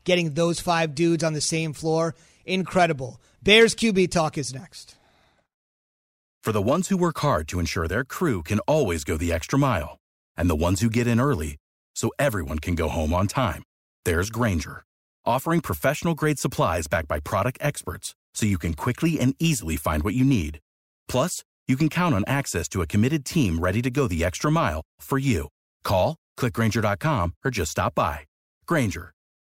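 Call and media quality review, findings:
Nothing to flag here; the speech came through without any fault worth logging in this ticket.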